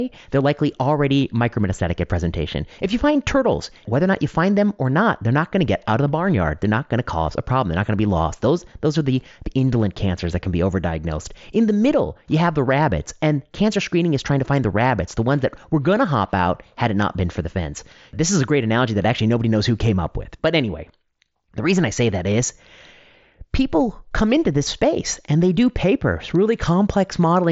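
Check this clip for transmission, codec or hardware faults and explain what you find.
Nothing here stands out as a fault; it's speech carried over a wideband Bluetooth headset link, so the sound tops out at around 7.7 kHz.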